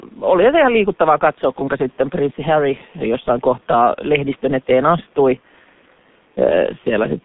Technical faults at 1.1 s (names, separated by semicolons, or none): G.723.1 codec